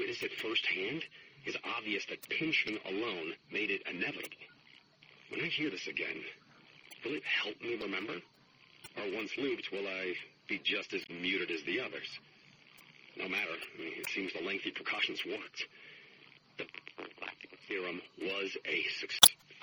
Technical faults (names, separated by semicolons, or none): MP3 compression; word clock ticks; damaged data in a compressed stream